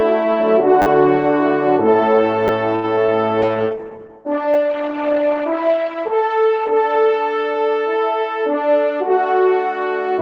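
At 0.82 s a repeated buffer fault begins. New audio arrived late, so the same short slice played again, four extra times, until 0.86 s. The repeats are about 10 ms long, which fits a 10 ms buffer. About 40 ms of audio is lost. It sounds like a brief buzz with hard joins. A single extra repeat follows at 2.48 s and is heard as a click.

From 2.75 s to 3.13 s there is repeated packet loss with a robotic sound. Four holes open in quick succession. The longest is 81 ms. Each is patched by stretching the previous sound. About 114 ms is filled this way and 60 ms is simply missing. That is roughly 30 percent of the stretch. The result is choppy.

A call bitrate drop runs from 3.42 s to 7.77 s. The bandwidth estimate fell. The coarser coding points to a fall from 32 kbps to about 9 kbps, at its lowest for 1.76 s. The cutoff moves from 12 kHz down to 8 kHz. The audio turns rough, watery and muffled. 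At 4.54 s, inside this stretch, another single buffer repeat adds a click.

From 8.54 s to 9.18 s a jitter buffer speed-up occurs. The buffer had gathered too much audio. To shrink the delay, the receiver cut out short pitch-period pieces, about 70 ms in total. Playback runs at 111 percent speed with unchanged pitch, so it sounds hurried.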